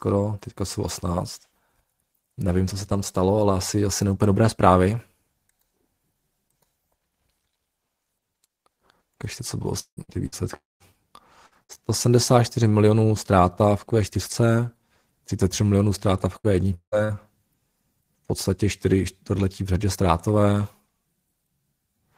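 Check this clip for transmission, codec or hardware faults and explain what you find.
Yes, the speech has network packet-loss faults, clustered between 9.8 and 11.7 s and again around 16.4 to 17.2 s.

From 9.79 to 10.00 s, and from 10.56 to 10.83 s after "co bylo ty", the audio stops. Each gap starts with a held continuation of the last sound, then goes silent for 90 ms and 200 ms. About 180 ms and 240 ms of speech are lost. A long network dropout is the likely cause. The receiver stretched the last sound, ran out, and resumed later.

There are four bursts of packet loss, at 10.03 to 10.11 s after "co bylo", 10.26 to 10.35 s after "co bylo ty", 11.46 to 11.54 s, and 11.63 to 11.72 s. Each removes about 60 ms. The receiver filled each hole by continuing the last sound at lower level, giving a brief held buzz or fading hiss.

From 16.38 to 17.19 s there is repeated packet loss with a robotic sound. 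There are four gaps, the longest 180 ms, and 300 ms of speech is missing in total. Concealment fills 37 percent of that span, so the speech sounds choppy and patched.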